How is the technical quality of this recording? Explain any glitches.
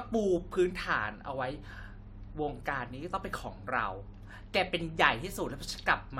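No glitches or faults are audible.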